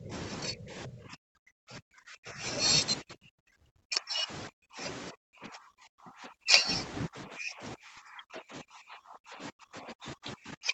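The speech keeps dipping and breaking up at 0 to 0.12, 0.49 to 2.44, 3.01 to 4.3, 4.48 to 4.82, 5.11 to 6.68, and 7.08 s to the end, sinking by roughly 20 to 40 dB. That's likely speech suppressed in double talk, with the echo canceller ducking this talker along with the far side.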